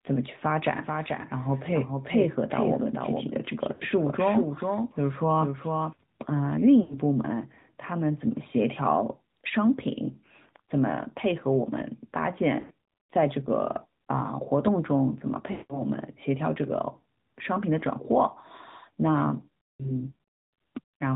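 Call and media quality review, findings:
AMR narrowband mobile codec, throughout: band-limited to 4 kHz, buzzy, synthetic speech, plainly audible coding damage. The pulse-driven vocal-tract model at a mid-rate mode fits about 10.2 kbps. Handset or network leg.

Doubled audio track, 0.83–5.93 s: full-band second copy roughly 0.4 s late, a few dB quieter, no room colour, abrupt start and stop. Likely a second, slower capture path or an edit leaving two copies misaligned.

Lost AMR speech frames at 3.74–3.83, 6.82–6.99, 12.60–12.74, 15.52–15.83 and 19.79–19.92 s: the decoder repeats the last pitch and tract settings with falling gain, giving smeared, warbling, fading sound. The 15.52 s run fades to silence. Radio-link checksum failures.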